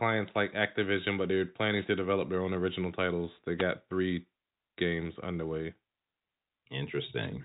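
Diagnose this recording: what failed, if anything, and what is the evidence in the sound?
The radio link between the wireless microphone and its receiver suffered brief fades, upstream of any conversion. Two wireless microphone noise hits cover the speech with a swish of static: one from 1.74 to 1.87 s, and a shorter one from 3.58 to 3.64 s. As reflected paths cancel the FM carrier, the receiver's own noise surges and masks the speech for that moment. The static stays within the G.711 telephone band, which ends near 3.8 kHz.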